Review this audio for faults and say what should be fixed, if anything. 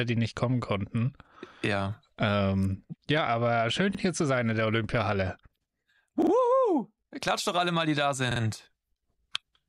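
Repeated buffer stutters at 3.95 s (one extra play), 6.22 s and 8.31 s (two each): a 46 ms piece, fitting a 2048-sample buffer, replays, showing as identical waveform blocks with vertical edge lines on a spectrogram. Prevent it with a larger output buffer or higher-priority audio thread.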